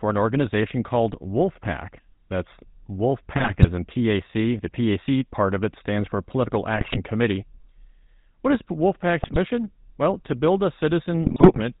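Throughout, the speech carries GSM full-rate codec damage: the 13 kbit/s coder rebuilds the voice from a vocal-tract filter driven by sparse, regularly spaced pulses and discards everything above 4 kHz. The result is a plainly buzzy, gravelly timbre with a dull top end.

GSM bit errors then hit at 3.36–3.69 s, 6.76–6.99 s, 9.22–9.37 s and, just after "to build a", at 11.24–11.61 s. Corrupted filter, pitch and gain values distort the spectrum and throw the level around frame by frame, so each burst breaks into squawks, pops and gargling.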